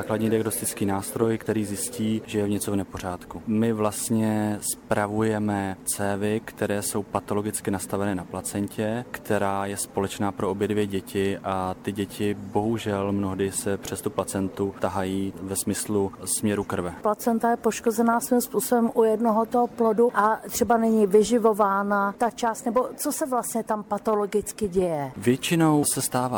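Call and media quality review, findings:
Damaged data in a compressed stream, 1.43 to 1.48 s. Brief glitch, about 50 ms. Component: decoder input. Corrupt bytes in the stream. Decoder misreads those frames, loses sync. It then hunts for the next valid frame header. Audio resumes cleanly after that point.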